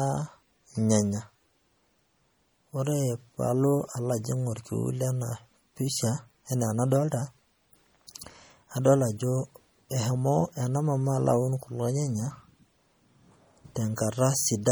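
Throughout the clip, the speech has a watery, swirling quality, and s sounds carry metallic chirps. This is likely MP3 compression. Starved of bits, the encoder drops weak frequency detail frame by frame, consistent with about 48 kbps. Nothing remains above 20.8 kHz.

At 13.96 s, pre-echo appears. A brief hiss, about 16 ms long, comes just before a sharp attack. The codec spread its quantisation noise across the whole block, so noise meant for the loud onset leaked into the quiet moment ahead of it.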